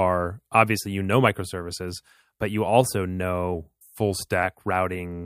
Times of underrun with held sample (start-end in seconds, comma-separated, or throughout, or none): none